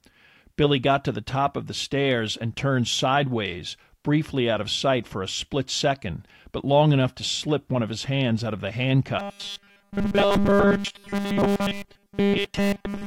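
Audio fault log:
9.19 to 13.06 s, robotic sound from repeated short buffers: from 9.19 s to the end of the clip, the speech becomes a rigid, metallic buzz fixed at 200 Hz that loosely tracks the syllables. The likely cause is new audio arriving too seldom, with playback filling the gaps by looping the last fragment. A 200 Hz tone fits a repeated segment about 5 ms long, and essentially all of the sound in this stretch consists of repeats rather than fresh audio.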